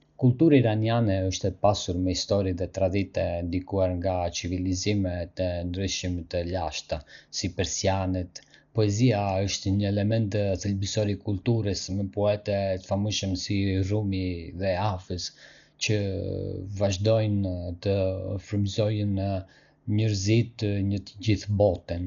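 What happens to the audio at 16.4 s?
At 16.4 s the speech sounds dull and muffled, with nothing above 6.9 kHz, and a rough, fluttering noise clings to the voiced tones. This lasts for the whole clip. The likely cause is heavy Dolby Digital compression at a low bitrate, consistent with about 48 kbps. The encoder narrowed the band and left many frequency lines without mantissa bits, and the decoder filled those gaps with dither noise.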